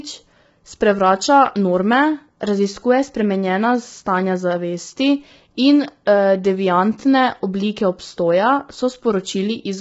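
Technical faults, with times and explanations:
Throughout, low-delay AAC compression: the speech sounds rough and grainy, with noise between harmonics and nothing above 7.8 kHz, likely AAC-ELD at a bitrate around 16 kbps.
6.05 s, pre-echo: a brief hiss, about 17 ms, precedes a sharp attack, as quantisation noise spread across the codec block fills the quiet moment before it.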